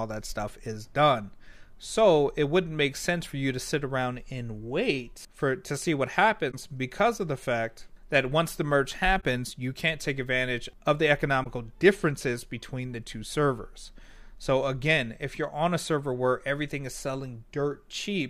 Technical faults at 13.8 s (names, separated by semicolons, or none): none